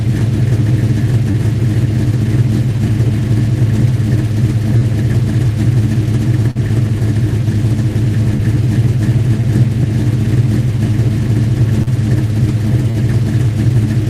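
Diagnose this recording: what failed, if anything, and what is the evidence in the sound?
The network stage failed with short concealed packet loss. Brief smears or wobbles occur at 1.31, 4.77, 6.51, 8.37, 9.41, 11.83 and 12.91 s. Each gap is 20 or 40 ms, which fits one or two lost 20 ms packets. The decoder extended the preceding sound, then blended back.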